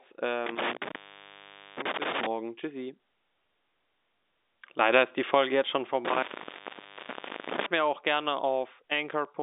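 Intermittent contact from 0.46 to 2.26 s, open for 0.82 s, and again from 6.05 to 7.66 s between "jetzt schon" and "mir auch gerne", open for 1.26 s. A loose connection drops the sound, leaving crackles at the edges; the waveform flattens, and the spectrogram shows blank gaps bounded by vertical clicks.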